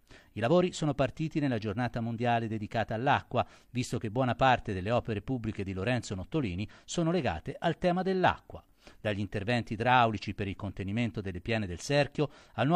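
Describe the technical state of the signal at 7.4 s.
At 7.4 s the signal is intact, with no dropout, distortion or other fault audible at that moment.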